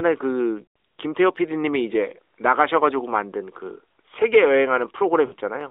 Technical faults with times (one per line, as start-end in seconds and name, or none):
0.64-0.77 lost AMR speech frames
5.26-5.34 lost AMR speech frames